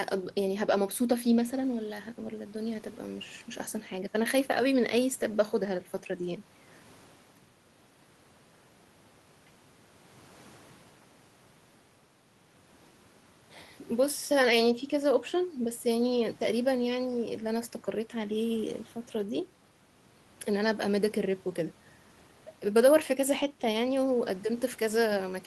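No technical faults are audible anywhere in the recording.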